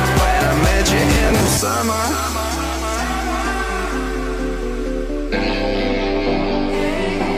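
Processor overload crackle runs from 1.15 to 1.48 s. The processor kept missing its deadlines for short buffers, around 10 ms each, and each miss replayed a scrap of old audio with hard edges. A dozen or more of these in a row make a gritty tearing that stops when the load passes.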